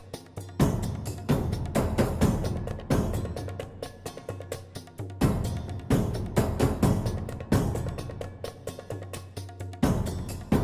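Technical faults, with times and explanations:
No technical faults can be heard anywhere in this audio. Nothing in it calls for a time or an explanation.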